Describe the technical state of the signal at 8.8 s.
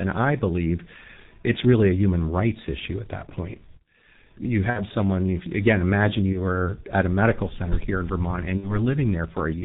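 Right at 8.8 s the speech is still weak or distorted as it recovers from a fading stretch that runs from 8.57 to 8.76 s. That stretch is VoIP packet loss concealed by the speech codec. About 60 ms of audio never arrived, which fits two lost 30 ms frames. The decoder filled the gap by repeating its last pitch and filter while lowering the gain. Because each decoded frame depends on the one before, the returning speech doesn't snap back cleanly and takes tens of milliseconds to regain its level.

Underneath this, and across the whole clip, the audio is muffled and hoarse, with smeared consonants and nothing above 4 kHz. This is heavy damage from the G.723.1 codec, at a rate that points to its 6.3 kbit/s mode. It codes speech in coarse 30 ms frames and updates its voice model slowly, so quick changes in the sound lose their detail.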